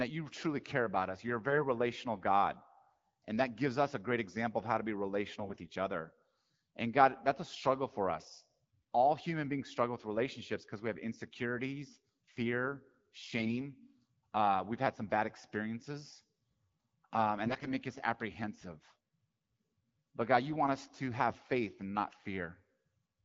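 Four short bursts of AMR bit errors show up, at 1.48 to 1.64 s, 5.40 to 5.68 s, 13.37 to 13.67 s and 17.46 to 17.73 s. On a shaky link, a few percent of the less-protected bits in the AMR-WB frames got flipped while the core checksum still passed. The excitation pulses land in the wrong spots and the fine pitch, gain and spectral values drift, so pitch and level mostly hold but the speech goes hoarse, scratchy and gargly for those moments. The wideband speech around them sounds clear, which fits a 12.65 kbit/s mode.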